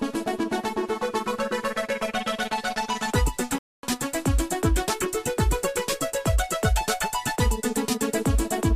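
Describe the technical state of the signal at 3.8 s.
At 3.8 s the output is inside a playback stall, 3.58 to 3.83 s: the sound halts mid-flow for about 0.25 s, likely from a starved or blocked player, showing as a flat waveform and blank spectrogram columns.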